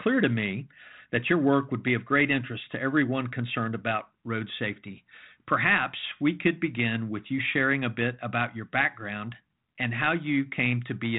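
Nothing stood out on listening to this speech clip, which carries the narrow telephone band of a 32 kbit/s G.726 ADPCM path, with nothing heard above about 3.9 kHz.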